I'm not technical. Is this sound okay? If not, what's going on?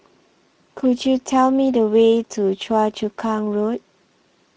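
No, not quite. The speech runs through the Speex codec the whole way, an older voice-chat compressor that squeezes the voice into very little data. That leaves it sounding plainly hoarse and grainy from start to finish, like an old game-chat call.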